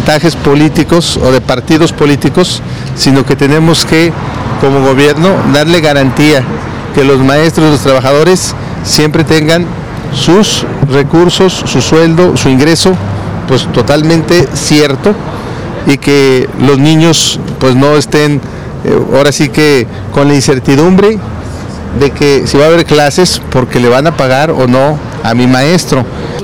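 The whole clip has hard clipping running through it, start to finish. Somewhere upstream the signal was pushed about 10 dB past what a stage could pass, so its peaks got sliced off flat. Roughly a tenth of the samples sit beyond that limit. Those squared-off tops generate extra harmonics high up the spectrum, and that's the buzzy, gritty distortion you hear riding on the louder parts of the audio rather than clean peaks.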